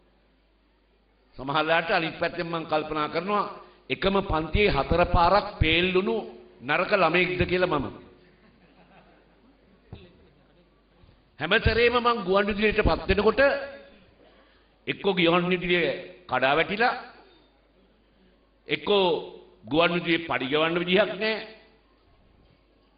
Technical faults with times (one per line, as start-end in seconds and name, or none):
none